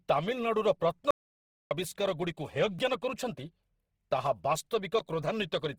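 Throughout the speech, the texture is grainy and rough rather than swirly, and the band stays full up to about 20.2 kHz. That points to Opus compression, likely in its CELT music mode at a low rate near 16 kbps: it fills starved bands with noise instead of leaving MP3-style holes.

From 1.11 s to 1.71 s the audio drops out to silence for about 0.6 s, probably because the input link or device was lost. It is silent with no room tone.

At 2.79 s and again at 4.99 s, a block of digital silence appears, about 2.3 ms and 10 ms long. Each is a block of zeros in place of the audio. They are heard as brief ticks, not as a gap in the speech.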